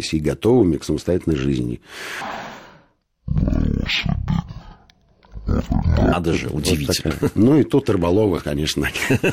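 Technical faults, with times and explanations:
2.21 to 6.12 s, stereo read as mono: the left and right samples are taken in turn as one channel, so speech runs at half speed and an octave (12 semitones) low. A spectrogram shows compressed harmonics plus a fainter mirrored copy in the upper half.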